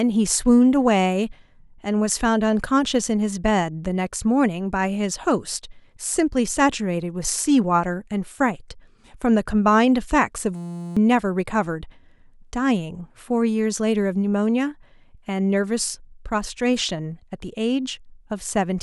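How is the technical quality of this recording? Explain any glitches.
There's one glitch worth flagging: a system hang loop from 10.56 to 10.97 s. The machine or audio driver stalled while the sound hardware kept replaying the same tiny chunk of its ring buffer, about 5.8 ms long, which fits a 256-sample buffer. Repeated roughly seventy times, that chunk comes out as a steady buzz at about 172 Hz instead of speech, and around 0.4 seconds of real audio is lost underneath it.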